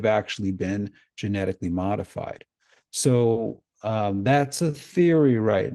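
From 3.05 s to the end, the speech slows to 0.64x in a time-stretched section, pitch intact but dragging, likely from software stretching.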